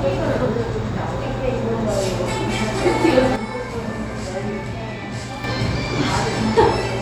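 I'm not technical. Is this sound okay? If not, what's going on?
No. There is a sudden gain jump. At 3.36 seconds the whole sound drops to a noticeably quieter level in an instant, with no fade. The background drops along with it. At 5.44 seconds it jumps back up just as abruptly. This is likely a volume setting being switched instantly, rather than turned down smoothly, somewhere in the recording or playback chain.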